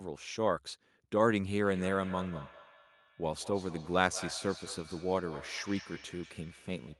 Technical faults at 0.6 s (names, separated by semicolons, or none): none